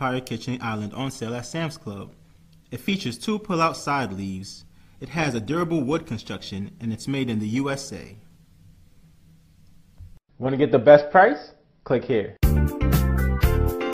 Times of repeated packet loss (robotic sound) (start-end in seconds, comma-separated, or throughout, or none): none